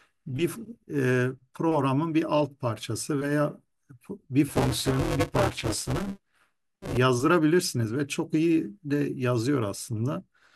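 Buffer tearing from 4.48 to 6.97 s: writer and reader cross every period, splicing in about 40% of a buffer of older audio, a 200 Hz robotic buzz.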